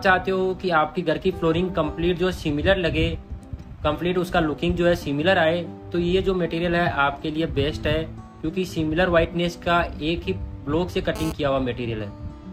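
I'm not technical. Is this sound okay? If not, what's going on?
No. At 11.16 s a harsh, raspy buzz cuts in for about a sixth of a second. That is GSM phone buzz: a nearby mobile phone sending data pulses its radio 217 times a second, and the recording equipment picks those pulses up as sound.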